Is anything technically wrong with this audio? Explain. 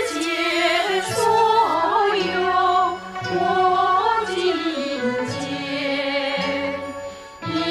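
Yes. From 1.74 s to the end, de-emphasis has been applied wrongly: a treble cut meant to undo pre-emphasis, applied where there was none or applied twice, sloping smoothly down to about 11 dB lower at 10 kHz than at 1 kHz. The sound turns dull and muffled, with a gradual tilt rather than the sharp cutoff of a low-pass filter.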